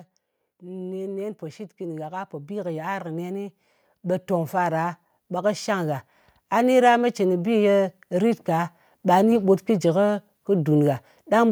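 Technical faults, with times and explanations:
0.59 to 7.74 s, automatic gain rising: the automatic gain control judged the incoming signal too quiet and kept raising its gain step by step over about seven seconds, for a total lift of about 14 dB. Because the gain stage cannot tell the speech from the room, everything it passes grows together, so the voice and the background noise beneath it swell in level side by side.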